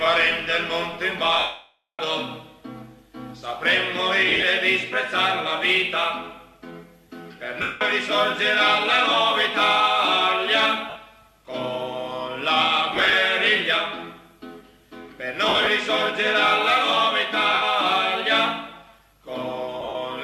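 Lost LE Audio frames occur at 1.39–1.99, 4.29–4.43, 7.62–7.81, 10.90–10.96, 12.95–13.13, 15.49–15.67, 17.54–17.62 and 19.81–19.95 s. The LC3 decoder fills each gap with the last spectrum, giving a noisy smear rather than a silent dropout. The 600 ms gap fades gradually toward silence.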